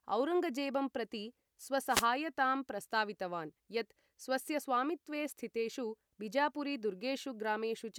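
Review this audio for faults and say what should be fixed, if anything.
A wireless microphone noise hit occurs from 1.88 to 2.07 s, a burst of static lasting about 0.19 s. The FM radio link faded as reflected signals cancelled at the receiver, letting receiver hiss rise over the audio. On a spectrogram it shows as a short vertical band of broadband noise across the full frequency range; the waveform shows a sudden noisy thickening. Prevent it by using diversity receivers with clear line-of-sight antenna placement.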